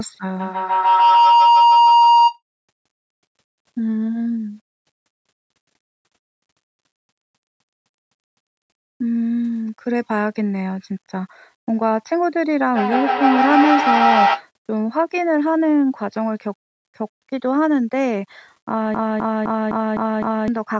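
Throughout the speech, quiet passages carry a grainy, signal-following distortion around 45 dB below the speech, which points to low bit depth without dither, likely rounding to about 9 bits. The error rises and falls with the sound rather than sitting as a steady hiss.

From 0.39 to 2.41 s a feedback howl builds near 1 kHz, pulsing roughly every 150 ms and peaking about 6 dB above the speech. Microphone-to-loudspeaker pickup was regaining level on each trip around the loop.

From 7.17 to 8.45 s a system hang loop repeats one 256 ms fragment five times, a stutter at 3.91 Hz that fits a 4096-sample buffer cycling while the system froze. About a second and a half of audio is lost.

A second feedback howl runs from 12.73 to 14.47 s, lower at around 700 Hz, with the same roughly 150 ms pulsing, peaking about 4 dB above the speech.

A second system hang loop occurs from 18.94 to 20.48 s, again a 256 ms fragment repeating at 3.91 Hz, this time six times, losing roughly another 1.5 s of audio.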